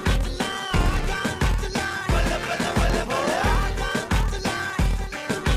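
Throughout the clip, a block size mismatch (padded) inserts a short gap into every block. This causes a 38.3 Hz buzz and slows playback to 0.889 times normal speed, which fits 1024-sample blocks being read as roughly 1152. Unlike a sample-rate error, the timbre stays intact.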